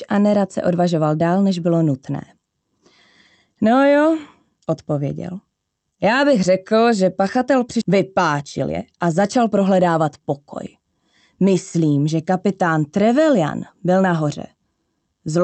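At 7.81 s there is a skip ahead: about a second of audio is dropped and playback jumps forward with no fill, so the sound on either side of the cut is butted together almost directly, giving an abrupt discontinuity rather than a pause.

From 7.91 s to 10.31 s a jitter buffer speed-up follows. The buffer, now holding more audio than its target, drains the excess by repeatedly removing short pitch-period segments, around a third of a second in total. Playback runs at about 113% speed with unchanged pitch and sounds noticeably hurried. The call codec limits the bandwidth to about 8 kHz throughout.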